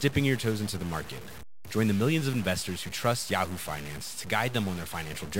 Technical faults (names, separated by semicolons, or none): stuck bit